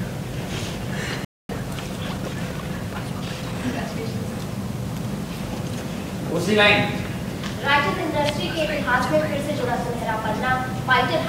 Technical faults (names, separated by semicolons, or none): playback stall; time-compressed catch-up